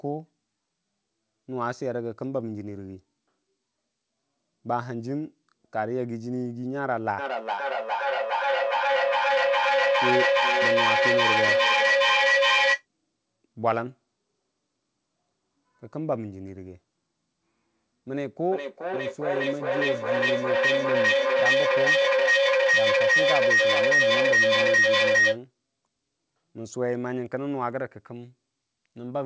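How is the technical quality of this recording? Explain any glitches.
The recording is marred by two stretches of feedback echo between two devices, heard over a call-band sound with nothing above 8 kHz, consistent with a wideband codec such as G.722.

From 7.19 to 12.86 s and again from 18.52 to 25.43 s, each word returns roughly every 400 ms, growing thinner and more ringing. The repeats build instead of fading, peaking about 7 dB and then about 9 dB above the speech. A second device in the room is replaying this call, and the original device's microphone picks that playback up again, where its echo canceller, which only removes what its own device plays, cannot remove it.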